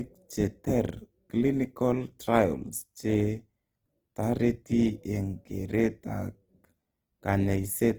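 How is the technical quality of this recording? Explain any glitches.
The technical quality is poor. Codec damage is plainly audible across the whole speech clip. The damage is likely from Opus compression, running in its music mode at a low bitrate, around 16 kbps. Bandwidth stays full, reaching about 20.2 kHz, so the sound is not muffled. Instead, the encoder runs short of bits and fills bands by folding lower ones or inserting noise. This keeps the band energy but loses detail. Voiced sounds turn rough, grainy and noisy.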